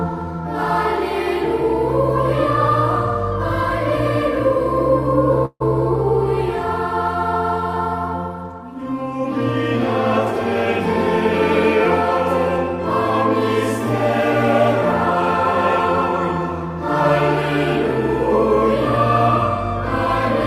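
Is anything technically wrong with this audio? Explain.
Yes, there's a call audio freeze at 5.45–5.62 s: the last sound smears into a fading buzz, then briefly goes silent, likely from delayed packets draining the jitter buffer.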